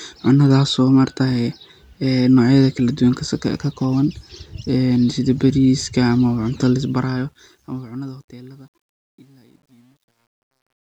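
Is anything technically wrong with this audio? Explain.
Yes. From 6.72 s to the end at 10.82 s, the speech fade-out shows truncation distortion on a fade. The gain stage keeps only about 10 bits without dither, so low levels collapse into coarse steps. From 8.29 s it turns gritty.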